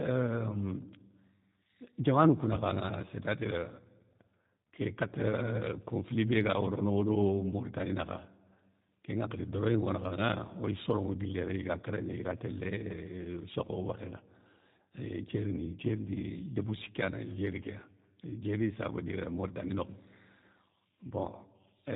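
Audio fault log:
Throughout: G.729 codec. The speech sounds slightly rough and synthetic, with a buzzy edge and nothing above 4 kHz. This fits an 8 kbit/s G.729A stream, which rebuilds each 10 ms frame from a vocal tract filter, a pitch predictor and a handful of pulses.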